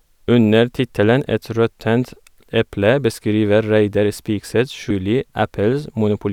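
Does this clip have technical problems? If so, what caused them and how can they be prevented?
Yes. At 4.91 s there is damaged data in a compressed stream. Corrupted bytes make the decoder misread a frame and hunt for the next header, producing a brief blip. A spectrogram shows a thin broadband vertical streak, and the waveform breaks abruptly there. Verifying files with checksums after transfer prevents it.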